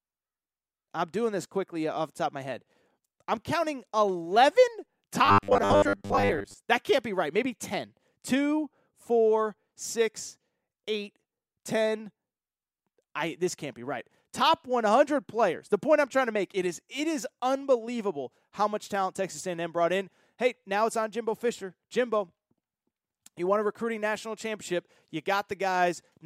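Speech, with robotic sound from repeated short buffers between 5.25 and 6.54 s. Across that stretch the voice collapses into a rigid, metallic buzz fixed at 100 Hz. It still tracks the rough shape of the speech. The likely cause is audio arriving too seldom, so playback fills the gaps by looping the last short block, which fits a 10 ms buffer. For most of that interval the real audio is being skipped.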